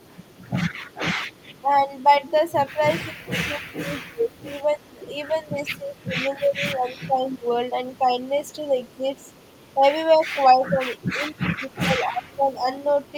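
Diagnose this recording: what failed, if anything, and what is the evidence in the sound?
The call processing most likely failed at the far end's echo canceller. Part of its loudspeaker pickup was never cancelled and went back down the line, which makes this an echo leak. A faint delayed copy of the speech trails it by 273 ms, at about 30 dB below the direct signal. It runs from 0.0 to 6.05 s and again from 6.98 s to the end.

The same echo canceller also shows speech suppressed in double talk. When both sides spoke at once, it probably could not separate the local talker from the returning echo and attenuated both. The speech dips in level or drops out in pieces at 1.62–2.13 s (about 10 dB, a few tenths of a second in total), 2.97–7.47 s (about 15 dB, roughly three seconds in total) and 10.14–12.67 s (about 20 dB, around a second and a half in total).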